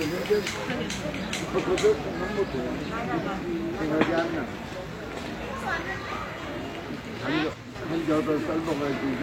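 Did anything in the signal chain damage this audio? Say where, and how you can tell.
Yes. From 7.54 to 7.75 s the level falls abruptly by about 6 dB. One channel drops out, likely from loose analogue wiring.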